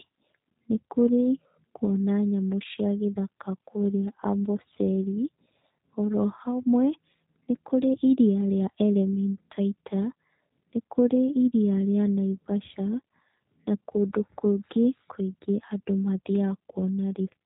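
Speech carrying G.729 codec damage throughout, plainly audible as rough, synthetic phonation; a spectrogram shows nothing above 3.8 kHz, consistent with an 8 kbit/s G.729A link.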